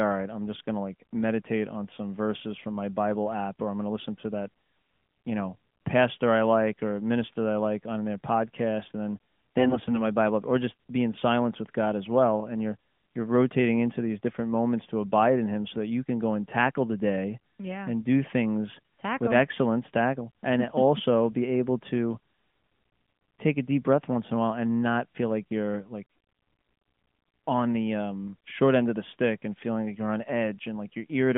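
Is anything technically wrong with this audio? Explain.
Yes. The speech carries AMR bit errors, heard through a narrowband mobile codec whose passband runs from about 150 Hz to 3.5 kHz with only light coding damage.

AMR bit errors occur from 9.58 to 10.02 s and briefly from 18.74 to 18.79 s. They point to a few percent of bits flipped in the weakly protected parts of the frames. Because the protected core bits stayed intact, the frames were still decoded, but with misplaced excitation pulses and wrong fine pitch, gain and spectral values. Level and rough pitch hold, while the voice turns hoarse, scratchy and gargly. On a spectrogram, the harmonic striations smear into grainy, noisy texture inside the band, and the waveform shows jagged, irregular cycles with no dropout or gap.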